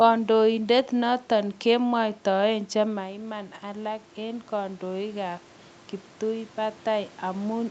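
Right after "noton kemwaitaen", at 2.84 s, you get automatic gain rising. The talker seems to drift back from the mic around 3 s, so the level arriving drops by about 10 dB, and the gain control reacts by slowly pushing its gain up, about 5 dB in total, until 5.49 s. You hear the voice and the room noise behind it swell together over those couple of seconds, all within the call's 8 kHz band.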